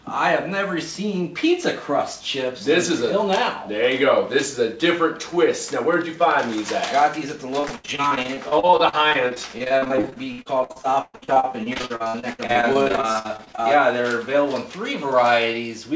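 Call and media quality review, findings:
Repeated packet loss (robotic sound), 7.60–13.59 s: choppy texture with pieces missing. Probable component: network/jitter buffer. Dozens of short dropouts, longest 120 ms, each patched by extending the preceding sound. About a third of the span is concealed. G.722 path band-limited at 8 kHz throughout.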